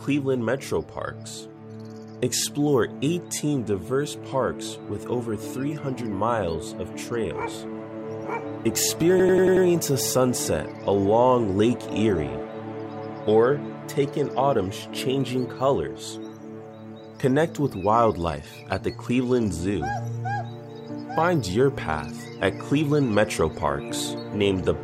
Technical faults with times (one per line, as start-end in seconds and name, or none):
9.20-9.66 system hang loop